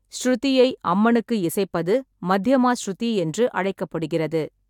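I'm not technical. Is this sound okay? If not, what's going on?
Yes, nothing in this speech recording points to a technical problem with the signal.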